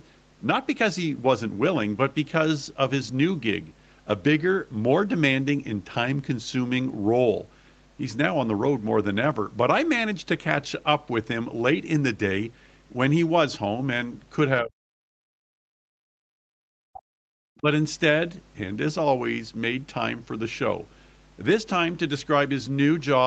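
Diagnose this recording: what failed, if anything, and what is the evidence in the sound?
Mains hum in the analogue wiring: a ground loop or nearby transformer is coupling the 50 Hz power line into the signal path. The result is a steady low tone, roughly 15 dB below the speech, under the whole clip, along with its low harmonics.

Speech suppressed in double talk in the call processing stage: the audio drops out from 14.61 to 15.48 s, again from 15.65 to 17.07 s, and briefly from 17.60 to 17.66 s. The first two dips fall by around 40 dB and the last by about 20 dB. This is likely the echo canceller mistaking the talker for loudspeaker echo while the far side spoke, and attenuating both.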